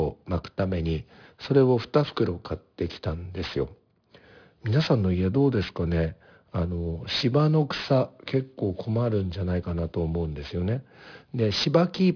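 Aliasing runs throughout: downsampling without a low-pass filter, which fits an 11 kHz rate, folds content above 5.5 kHz back down, leaving sibilants gritty and metallic.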